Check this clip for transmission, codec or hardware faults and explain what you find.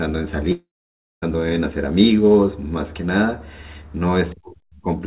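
One transmission fault stands out near the start; the narrowband call path, with nothing above 4 kHz, sounds consistent with a G.711-style codec.

Long network dropout, 0.52 to 1.24 s: the audio likely stopped arriving for about 0.7 s, so the receiver stretched the last sound into a fading buzz before leaving roughly 0.55 s of near-silence. The speech then resumes with that stretch missing.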